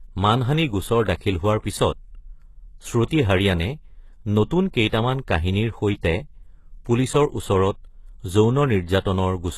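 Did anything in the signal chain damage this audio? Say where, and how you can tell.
Yes. Throughout the speech, treble above 12.3 kHz is missing and the s sounds are gritty and metallic. This is likely HE-AAC compression at a rate that fits about 16 kbps, with synthetic band replication rather than plain lowpass dulling.

Pre-echo appears at 4.88 s and 9.0 s, where short hiss spreads about 50 ms ahead of the attacks. This codec block-noise smear comes before the onset, unlike reverb, which trails after it.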